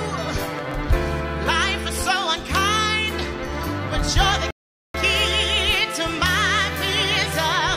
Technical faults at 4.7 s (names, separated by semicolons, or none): rebuffering stall